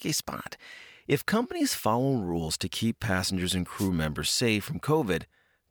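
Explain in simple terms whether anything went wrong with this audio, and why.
Yes, something went wrong: a wireless microphone noise hit. The microphone's radio signal briefly faded, so the receiver's own hiss rose and covered the speech. You hear a short burst of static from about 3.76 to 3.90 seconds, right after "to keep passengers and", before "members safe".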